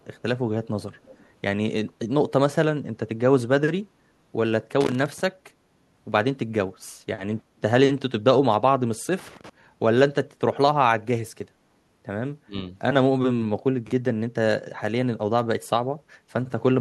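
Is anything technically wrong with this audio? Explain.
Yes, there are several faults in this speech.

From 1.05 to 1.26 s, a faint copy of the voice trails about 330 ms behind, roughly 30 dB down. This is likely an echo leak, a speakerphone echo canceller letting residue back. On a spectrogram it appears as a weak, shifted repeat of the speech pattern.

Loose connector crackle occurs from 4.81 to 5.20 s and again from 9.19 to 9.49 s. A flaky contact makes and breaks, producing irregular scratchy bursts that show as sharp spikes in the waveform and broadband vertical streaks on a spectrogram.

At 7.43 to 7.61 s, the background is gated by the echo canceller. The room sound drops about 9 dB for around 200 ms while the far end plays, which shows as a brief notch in the noise floor.

Around 12.45 to 12.56 s, the speech dips sharply, about 20 dB for roughly 100 ms. This is likely speech suppressed in double talk, when the canceller attenuated the talker during overlapping speech. 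On the waveform it is a short envelope hole, and on a spectrogram a faded patch.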